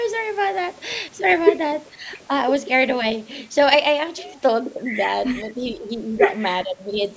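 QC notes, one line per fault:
1.91–2.1 s, 5.76–5.89 s and 6.64–7.0 s, speech suppressed in double talk: the speech dips by up to about 10 dB in short bursts, most likely because an echo canceller mistook the talker for loudspeaker echo while both sides spoke and turned everything down.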